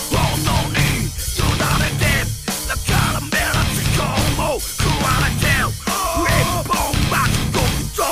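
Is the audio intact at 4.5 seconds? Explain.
Yes, the audio at 4.5 seconds is intact, with no dropout, glitch or other fault at that moment.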